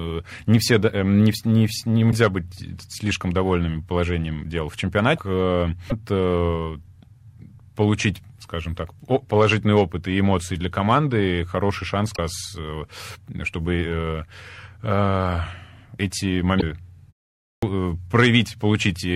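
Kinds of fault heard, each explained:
Damaged data in a compressed stream: Five short blips, each around 30 to 55 ms, at 2.08, 5.14, 5.89, 12.14 and 16.58 s. Corrupted bytes in the coded stream make the decoder misread those frames and hunt for the next valid header. The first comes just before "быть слишком довольными положением", the second right after "довольными положением дел в", and the fourth follows "для команды хороший шанс".
Clipped start after a pause: At 17.57 s, after a pause of about half a second, the speech comes back with its first 55 ms missing, so it starts abruptly out of silence. The output device drops into a low-power or unlocked state during the gap and needs a moment to wake.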